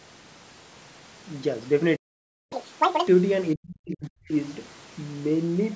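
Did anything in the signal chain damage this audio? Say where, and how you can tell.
Yes. At the playback stage the player most likely ran dry or had its thread blocked, a playback stall. The speech cuts to silence at 1.95 s and stays out for about 550 ms before resuming at 2.53 s, a clean gap mid-flow rather than a dropout in the signal itself.

Still in playback, the player then clears its backlog with a catch-up at higher speed, resampling to win the time back. From 2.53 to 3.08 s the speech runs at double speed, which lifts the pitch by roughly ten semitones, giving a chipmunk quality until it snaps back to normal.

In the call processing, the echo canceller was likely confused by both sides talking at once, so speech was suppressed in double talk. Between 3.54 and 4.33 s the level drops, as deep as about 40 dB, with roughly 0.7 s affected.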